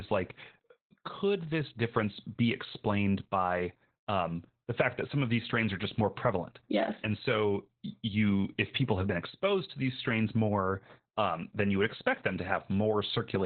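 From start to finish the speech carries Opus voice compression damage. Nothing reaches above about 4.2 kHz, so the band is cut to narrowband and the speech sounds muffled and boxed in. The SILK coder models the voice with linear prediction and codes its excitation very coarsely here. That leaves the speech hoarse, rough and slightly robotic. The damage is heavy, which fits a bitrate near 8 kbps.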